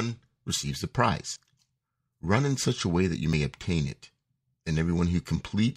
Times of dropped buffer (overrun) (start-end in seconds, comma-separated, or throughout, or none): 1.36, 3.33